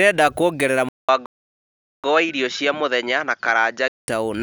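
At 0.89 s the sound drops out for about 200 ms, then comes back duller, with a faint new background noise sitting well under the speech. The level stays about the same. That's the signature of an input switched to a poorer device, likely the system hopping to a narrower-band mic or headset profile mid-recording. The duller tone holds until 4.08 s, when the fuller sound returns.

Then, while still on that duller input, a playback stall hits at 1.26 s: the output goes completely silent for about 780 ms and picks back up at 2.04 s. A gap that long in the middle of speech likely means the player starved of data or had its thread blocked, so it simply had nothing to output until it recovered.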